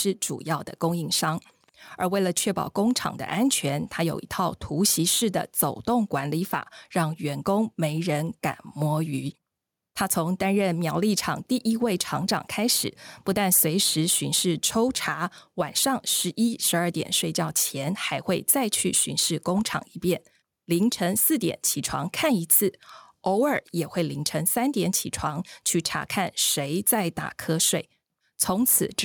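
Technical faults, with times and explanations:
Throughout, gain pumping: the level of the speech swells and ducks by around 5 dB. Quiet and loud passages sit unnaturally close together, giving a squashed, breathing quality to the whole recording. This is likely the microphone gain set far too high, with a fast limiter or compressor clamping down on every peak and then releasing during gaps.
1.64 to 1.69 s, loose connector crackle: a short, ragged burst of crackle and scratching lasting about 50 ms. A worn or dirty contact in the signal path is momentarily making and breaking as it shifts, chopping the audio on and off in rapid, irregular fashion.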